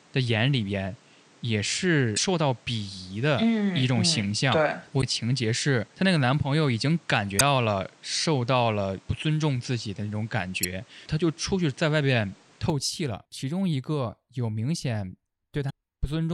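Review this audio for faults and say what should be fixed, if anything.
From the start up to 12.7 s the speech sounds dull and a bit boxy, with nothing above 9.8 kHz, a noise floor only around 30 dB down, and a level about 5 dB off. At 12.7 s it opens up with no gap. That's most likely an input switched to a poorer device. Lock the input device for the whole session so the system can't hand off mid-take.

There are also short glitches at 2.13–2.19 s, 4.98–5.03 s, 7.38–7.41 s, 10.63–10.65 s and 15.66–15.71 s. That's damaged data in a compressed stream: the decoder hits corrupted frames, loses sync, and searches for the next frame header. Checksum the files and re-transfer or re-export from a clean source.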